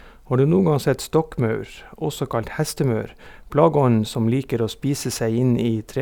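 No faults can be heard at any point in the recording.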